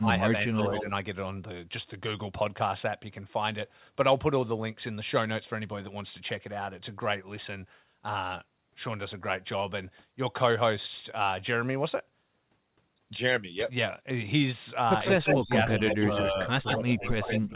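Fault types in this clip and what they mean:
Speech suppressed in double talk: the speech dips deeply at the start and again near the end, likely an echo canceller ducking it while both sides spoke. Unlike a dropout, it stays faintly audible.
Echo leak: a distinct copy of the speech trails 152 ms behind, fairly loud near the end, likely uncancelled loudspeaker pickup. Unlike room reverb, it is a separate repeat.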